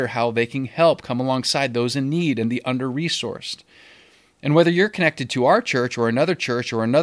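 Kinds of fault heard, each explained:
No technical faults heard.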